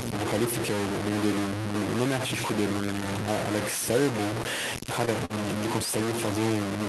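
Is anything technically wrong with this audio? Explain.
Yes. Low bit depth without dither runs through the whole speech clip. The signal is likely held at about 3 bits and truncated rather than rounded, so the quantisation error is roughly as loud as the speech and tracks it. Quiet passages become coarse, grainy distortion, and the softest moments drop to silence or sputter between steps.

Short stalls from a late packet occur at 5.05 s and from 5.25 to 5.43 s. Packets arrived late and the jitter buffer ran dry, so the receiver held the last sound for about 17 ms and then about 46 ms before resuming. Little is lost, but the sound briefly drags or buzzes. The Opus call path limits the band to roughly 12 kHz.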